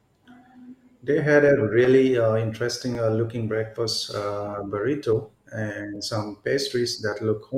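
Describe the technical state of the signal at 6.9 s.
At 6.86 s the speech carries a corrupt frame decoded: damaged bits in the compressed stream were played back instead of being discarded, so misread gains and codes briefly put energy at the wrong frequencies. It sounds like a tiny, quiet chirp or blip, peaking around -35 dBFS. Its brevity points to only a few damaged frames. Unlike a lost frame, which leaves a gap or a smoothed repeat, this adds foreign, tonally unrelated energy.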